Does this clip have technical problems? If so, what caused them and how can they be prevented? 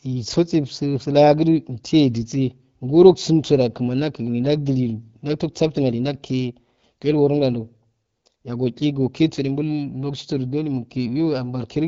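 No, there are no technical problems in this speech clip. It has the narrower, slightly band-limited sound of AMR wideband (HD Voice) coding at a rate around 12.65 kbit/s, where speech stays clear and the coding leaves only light traces.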